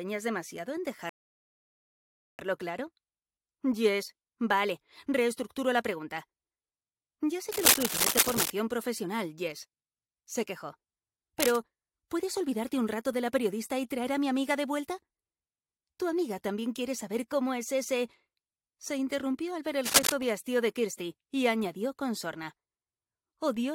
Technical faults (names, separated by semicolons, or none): rebuffering stall; cable scratch noise